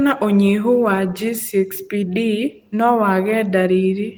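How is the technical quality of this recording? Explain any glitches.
No glitches are audible anywhere in the recording, so there is nothing to explain.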